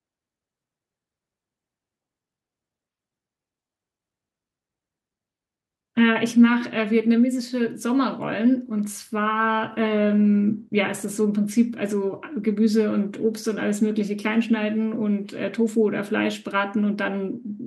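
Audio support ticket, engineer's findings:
No audible faults found in this speech recording.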